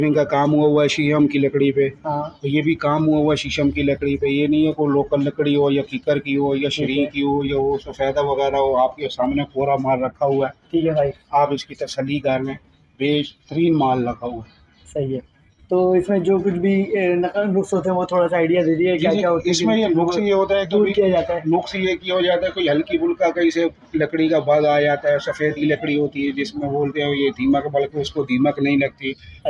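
No technical faults can be heard anywhere in the audio. There are no breaks, dropouts or other interruptions at any point.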